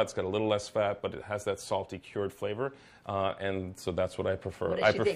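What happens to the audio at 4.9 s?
Nothing goes wrong at 4.9 s; the audio plays through that moment intact, with no dropout, click, glitch or distortion.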